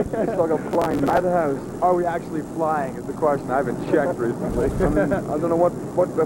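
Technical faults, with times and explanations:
0.71 to 1.18 s, processor overload crackle: the processor falls behind and misses the deadline for a long run of small audio buffers, which sounds like blocks of around 5 ms, with something like thirty missed across this half second. Each missed block is skipped instead of filled with held audio, so the sound keeps dropping out with hard edges. Those rapid gaps merge into a gritty, tearing crackle over the sound that stops once the load eases.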